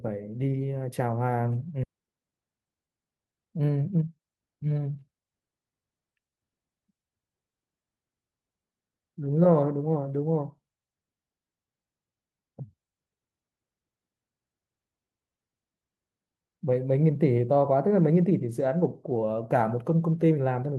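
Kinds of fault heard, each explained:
Skip ahead: At 1.83 s the speech jumps forward with no gap, and about a second of audio never plays. The receiver discarded that stretch while later speech was already queued, so the delay dropped sharply by roughly the same amount. The sound before and after the jump is butted together almost directly, so the listener hears an abrupt splice rather than silence, and whatever was said in that second is simply absent.
Jitter buffer speed-up: From 1.93 s to 5.22 s the speech runs at about 117% of normal speed while keeping its pitch, so it sounds hurried. The buffer was holding more audio than its target, so the receiver repeatedly cut out short slices of one or a few pitch periods to bring the delay down. Across this stretch those small cuts add up to about half a second removed.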